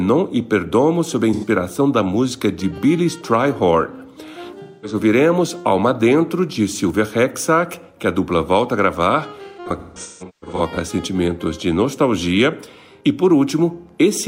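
At 1.33 s and 4.62 s there's AAC frame loss with concealment. The decoder papers over gaps of about 85 and 213 ms by reusing the last good spectrum, so each spot turns briefly smeared and phasey. From 9.48 to 10.77 s the dropouts scatter, in runs up to around 150 ms, leaving a choppy, noisy stretch.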